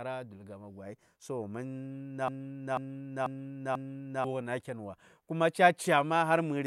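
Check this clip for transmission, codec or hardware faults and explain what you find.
One fault stands out, a broken-record loop from 2.28 to 4.24 s. A fragment of about 490 ms repeats four times back to back. The playback chain likely stalled and kept re-sending its last buffered piece, so the speech due there is lost. On a spectrogram or waveform, four identical blocks tile that span.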